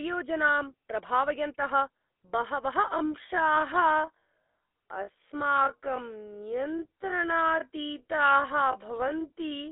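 From start to finish the speech has the grainy, buzzy roughness of the GSM full-rate codec, and the damage is plainly audible. The codec rebuilds the voice from a vocal-tract model excited by evenly spaced pulses, so fine detail turns gravelly, consistent with a 13 kbps full-rate stream. The band sits roughly between 250 Hz and 3.6 kHz, with nothing above 3.8 kHz, which leaves everything sounding boxed-in and telephone-thin.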